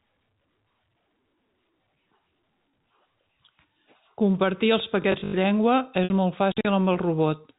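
From 5.02 to 5.34 s the speech collapses into a rigid, metallic buzz, the robotic sound from repeated short buffers. It is likely caused by a 20 ms block being replayed for roughly half that span, which forces a 50 Hz pitch. A spectrogram shows evenly spaced horizontal harmonics at 50 Hz multiples, and the waveform shows one short pattern copied end to end.

From 6.04 to 6.10 s, packet loss with pitch repetition covers a 60 ms gap, which fits three 20 ms packets. The receiver repeats the last pitch period and fades it, so a brief held, buzzy note appears. The waveform shows identical cycles shrinking in amplitude. In the spectrogram, the harmonics freeze flat inside the 4 kHz telephone band.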